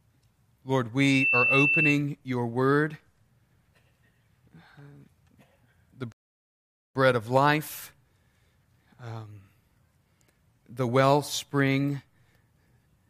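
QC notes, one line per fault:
6.12–6.95 s, rebuffering stall: the player ran out of downloaded audio, so the speech drops to silence for 0.83 s, then resumes intact at "of life".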